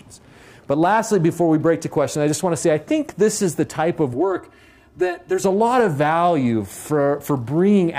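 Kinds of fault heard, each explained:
Channel delay (comb filtering): one channel runs late by about 3 ms and the two are summed to mono, so shared content cancels at evenly spaced frequencies starting around 150 Hz, leaving the sound hollow and phasey from 4.14 to 5.44 s.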